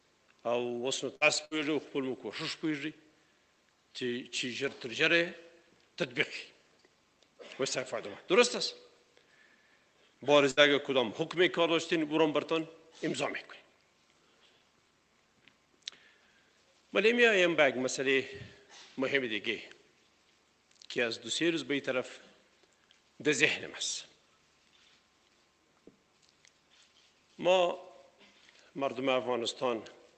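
At 1.15 to 1.24 s, again at 1.45 to 1.54 s, and once more at 10.51 to 10.60 s, the sound briefly freezes into a held, fading tail and then jumps ahead. Each is a burst of packet loss on the call path. A run of packets never arrived, so the receiver stretched the last sound for roughly 55 to 60 ms while turning it down, and about 60 ms of audio is simply gone.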